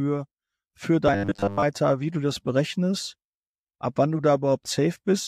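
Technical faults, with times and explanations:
1.08 to 1.64 s: robotic sound from repeated short buffers. The speech hardens into a flat, metallic buzz at 100 Hz that still roughly tracks the syllables, likely because new audio arrived too rarely and a segment of about 10 ms was looped to fill the gaps, with most of the stretch made of repeats. On a spectrogram, rigid horizontal harmonics appear at multiples of 100 Hz; the waveform shows identical 10 ms cycles repeating.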